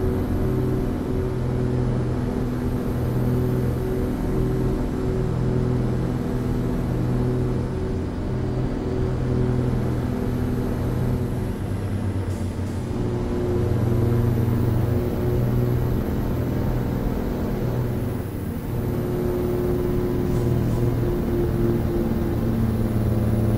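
Everything here comes through twice: it's a doubled audio track running the whole way through, with a second full-band copy trailing the original by around 0.4 s and sitting at roughly the same level. Since the copy carries no decay or room colour, it doesn't read as reverb or a slapback off a wall. It sounds like a clean duplicate out of step. The likely cause is the same signal being picked up again through a slower path.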